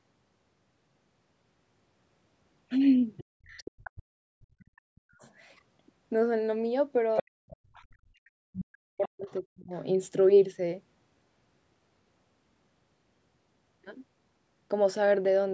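Speech recording with the other side's voice leaking through at 3.17–4.02, 4.60–4.64, 5.21–5.32, 7.15–7.82 and 8.53–9.80 s, ranging from faint to only about 10 dB below the talker, likely residual loudspeaker echo the canceller missed; a spectrogram shows a second, weaker harmonic pattern overlapping. Speech is also suppressed in double talk at 3.43–5.23 and 7.22–9.73 s, roughly one and a half and two seconds affected, dipping very deeply. The canceller likely turned the talker down while both spoke, and the waveform shows hollowed, gapped stretches.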